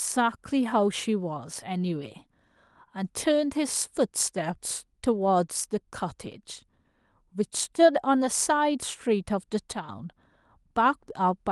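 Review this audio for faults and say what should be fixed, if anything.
A sudden gain jump occurs at 9.72 s: the speech and its background noise drop together by about 6 dB in a single step, then return abruptly at 9.89 s. This is likely a digital gain change applied instantly. Applying gain changes through a short ramp or crossfade would prevent it.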